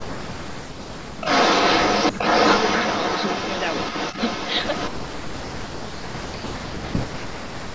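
From 0.01 to 1.28 s the speech drops by about 40 dB in pieces. This is speech suppressed in double talk, likely from an echo canceller turning down its own talker along with the loudspeaker echo while they overlap. The waveform shows gaps, and the spectrogram shows faded bands. The same dips return at 2.12 to 2.21 s (about 20 dB), 4.89 to 6.95 s, and 7.42 s to the end.

Between 1.05 and 4.9 s, an echo leak adds a copy of the speech at roughly equal level, 348 ms late. This is likely a loudspeaker echo that was not fully cancelled. On a spectrogram it appears as repeated, offset patterns.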